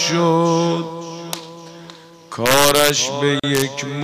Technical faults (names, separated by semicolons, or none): integer overflow; gap at a join of encoded pieces